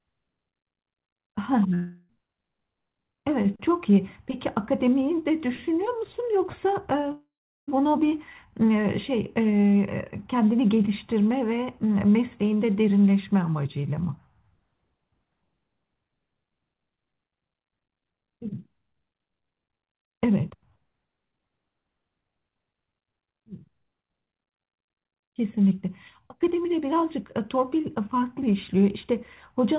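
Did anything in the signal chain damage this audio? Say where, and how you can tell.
Yes, a long network dropout, likely at the network stage, at 1.74–2.11 s and 7.12–7.69 s. A fading concealment buzz fills each gap, and the second gap ends in silence. The sound then resumes with that stretch missing, which is longer than a brief packet-loss click.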